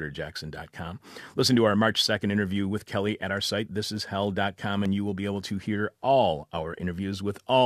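At 4.86 s, just before "you will be able", an overlap between stream segments causes a brief skip. Two segments' timestamps overlapped, so the player discarded about 12 ms of genuine speech, and the waveform jumps across the gap.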